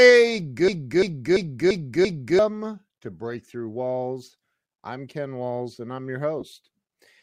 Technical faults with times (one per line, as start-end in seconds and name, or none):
0.68-2.39 system hang loop
6.40-6.42 lost LE Audio frames